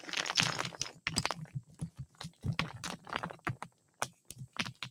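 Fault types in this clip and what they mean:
noise suppressor applied to music or sounds: a speech-oriented suppressor stays active across the whole clip, treating sustained tones and ambience as noise, so level swings by roughly 15 dB, with onsets passing while held portions and decays sink.
sound cut by the noise suppressor: from 1.46 to 2.44 s and 3.62 to 4.31 s, the suppressor judged these stretches to be noise and pulled them down, by about 14 dB and about 13 dB at the deepest.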